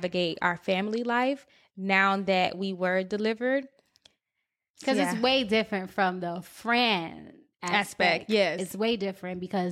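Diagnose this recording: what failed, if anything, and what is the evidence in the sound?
Nothing failed in this recording, and the sound gives no evidence of a fault at any stage.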